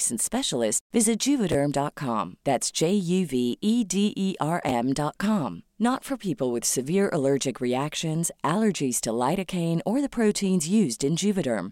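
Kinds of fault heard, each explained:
Chunks out of order: an 11.6 ms chunk plays one slot late at 1.52 s, after "specialist visit", and 4.69 s, producing a jumbled moment.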